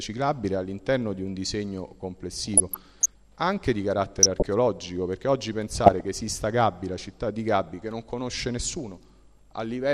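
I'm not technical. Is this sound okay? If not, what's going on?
No. The whole clip sounds dull and muffled, with a grainy, gurgling edge, as if the top end has been shaved off and what remains is rough. That is most likely MP2 compression, the older audio format used by digital radio. To save space it splits the sound into narrow slices of pitch and gives each only a few bits, so the highest slices get dropped altogether and the rest are stored roughly.

On top of that there are three short stretches of DAB burbling: from about 2.36 to 3.14 seconds, 4.02 to 4.46 seconds, and 5.75 to 6.05 seconds. In those moments short blips of noise pop up in the sound. This comes from weak radio reception: a small share of the received data arrives wrong and slips past the error correction, so individual pitch slices briefly jump in level or go odd.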